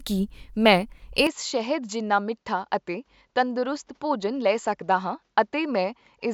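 At 1.27 s the speech turns duller and slightly quieter without any gap, staying so to the end, likely an input switched to a poorer device. A spectrogram shows nothing above 7.6 kHz and a faint new noise floor; the waveform shrinks slightly.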